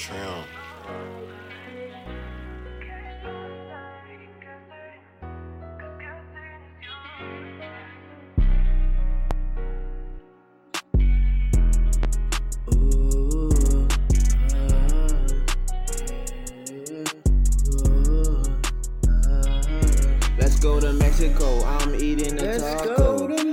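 At 9.31 to 9.34 s and again at 12.03 to 12.07 s there's a loud pop, a single sharp thump roughly 10 dB above the sound, which keeps going underneath. It's likely a voltage spike from a switch, plug, static or driver glitch.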